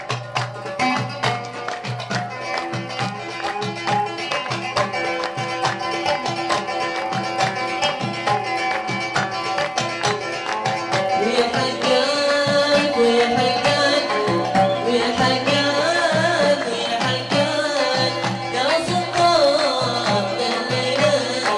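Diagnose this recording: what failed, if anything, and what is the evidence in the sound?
A steady 50 Hz buzz rides under the sound throughout, present only with signal. This is the resampler restarting on every 20 ms block, most likely a 48 kHz to 24 kHz conversion.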